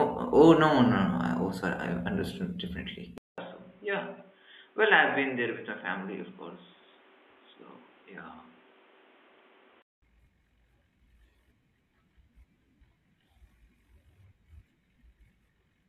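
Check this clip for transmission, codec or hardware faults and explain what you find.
One fault stands out. From 3.18 to 10.02 s the speech turns dull and boxy, with nothing above 3.8 kHz, drops roughly 10 dB in level, gains a new noise floor about 30 dB down, and opens with a 200 ms gap. The likely cause is an input switched to a poorer device. Unlike a codec bandwidth drop, it changes level, tone and background noise together.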